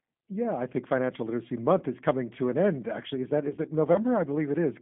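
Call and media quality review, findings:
G.729 codec on the call path, throughout: low-rate speech coding consistent with 8 kbit/s G.729A rebuilds speech synthetically. Band limited to 150 Hz to 3.5 kHz, nothing above 3.6 kHz, plainly rough, synthetic texture.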